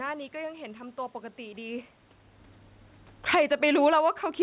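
From 2.9 s to 4.08 s the automatic gain falling: the control judged the input too loud or its background noise too strong and pulled its gain down gradually by about 17 dB, so the speech starts strong and then sinks over more than a second. What separates this from the talker simply moving, as happens around 1.5 s, is that the room noise sinks with the voice. The whole signal is being turned down, not just the speaker moving away.

Overlapping it, from 3.51 s to the end at 4.42 s, comes automatic gain rising. The input had dropped by about 22 dB, and the control responded by slowly raising its gain, so voice and background swell back up together rather than jumping. Near 4.0 the talker also shifts position, but that changes only the voice level. The gain ramp lifts the room noise alongside it. Throughout, the G.711 call path leaves nothing above 4 kHz.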